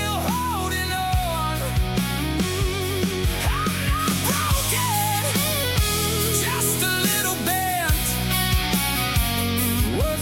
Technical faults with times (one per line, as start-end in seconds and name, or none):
3.99-9.88 pre-emphasis left on